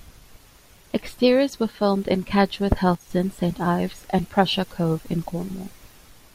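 At 2.95 s a sudden gain jump drops speech and background together by about 6 dB until 3.1 s, likely an unramped digital gain step.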